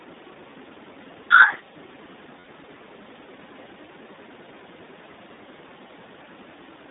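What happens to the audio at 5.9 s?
For a split second, from about 5.88 to 5.91 s, the sound turns into a brief held, slightly buzzy, breathy tone before snapping straight back to normal. These are lost iLBC frames. The gap fits a single 20 ms packet going missing, and the iLBC decoder filled it by repeating the last pitch cycle blended with noise. Because each iLBC frame is coded independently, the very next frame decodes cleanly and the audio recovers immediately.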